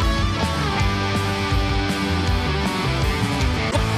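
A brief glitch from 3.67 to 3.77 s marks damaged data in a compressed stream, where corrupted bytes throw the decoder out of frame sync.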